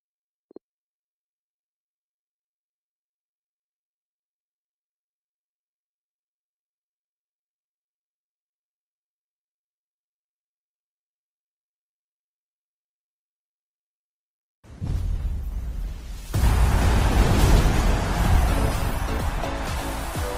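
A call bitrate drop from 14.32 s to the end makes the audio turn rough and muffled, consistent with the encoder falling from about 96 kbps to about 17 kbps.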